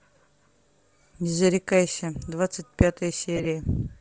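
Throughout, the speech carries a grainy, breathy edge with noisy, blotchy highs on a spectrogram, likely Bluetooth LC3 compression at a rate near 32 kbps. From 3.36 to 3.46 s, lost LE Audio frames cause brief noisy smears. About 45 ms of audio goes missing in short, scattered runs, which fits six lost 7.5 ms frames. On a spectrogram these show as blurred vertical patches.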